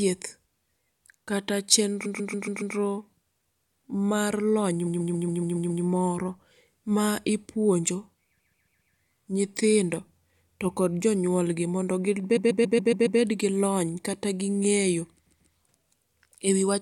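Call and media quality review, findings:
Repeated frames: the same 139.3 ms block of compressed frames is re-sent and replayed, causing a stutter at 2.05 s, 4.86 s, 8.38 s, 12.36 s and 15.26 s.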